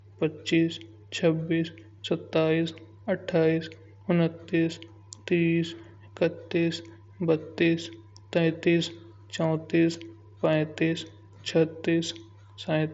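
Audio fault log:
No faults heard in this speech clip.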